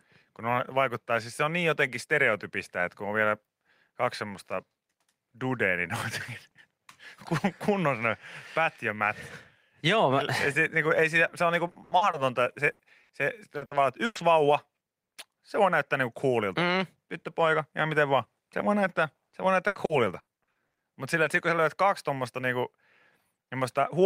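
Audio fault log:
11.67–12.15 s, 13.57–14.21 s and 19.29–20.81 s, repeated packet loss (robotic sound): the speech turns choppy, with pieces missing, as holes come in quick succession (five, four and nine gaps). Each is patched by carrying the last sound forward, so about 42%, 34% and 28% of these stretches is repeated material rather than real speech. The longest gaps are 80, 100 and 80 ms. On a spectrogram, smeared, flattened harmonic blocks alternate with normal detail. The waveform shows repeated, self-similar cycles.
12.71–12.81 s and 13.03–13.11 s, burst of packet loss: roughly 80 ms and then 60 ms of speech never arrived in time. The receiver stretched the last sound over each hole and faded it down, so voiced sound becomes a brief held buzz and unvoiced sound a dying hiss. The speech then resumes with that slice gone. A spectrogram shows frozen horizontal harmonics or a fading noise patch. 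The waveform shows a decaying, periodic section.
21.23–21.27 s, short concealed packet loss: about 20 ms of speech was lost and filled by extending the preceding sound before blending back into the real signal. It is heard as a tiny smear or wobble, and a brief consonant may drop out. On a spectrogram this appears as a narrow column where the fine detail blurs or repeats. The waveform shows a short, overly regular patch with a soft join at either edge.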